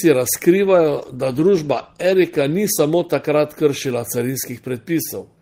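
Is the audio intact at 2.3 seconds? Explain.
No. At 2.3 seconds the speech sits inside a call bitrate drop running from 0.63 to 3.91 s. The encoder's budget falls from 32 to 15 kbps, bottoming out for 1.71 s, so coding turns coarse and rough. Unlike packet loss, the sound stays continuous, without gaps or glitches.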